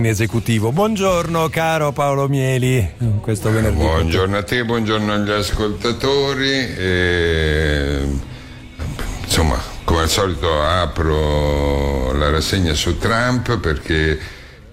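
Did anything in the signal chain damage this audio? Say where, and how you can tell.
Yes, DAB burbling from reception errors at the codec stage: short noise blips at 1.37–1.51 s and 4.46–4.70 s, as a low residual bit-error rate corrupts MP2 sub-band samples.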